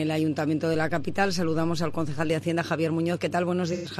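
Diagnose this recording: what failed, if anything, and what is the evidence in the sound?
A DC step at the converter or analogue input stage shifts the waveform's zero line at 0.74 s and returns it at 2.30 s. Each shift gives a low thump. The sound carries on unchanged through both, so this is an offset switching in and out, not a dropout or a signal break.

AAC frame loss with concealment at the codec or transport stage affects 3.72 to 3.89 s. About 0.13 s of coded data is missing, which points to three lost frames. The decoder rebuilds the gap from the last good spectrum, giving a smeared, noisy or phasey patch rather than silence or a hard click.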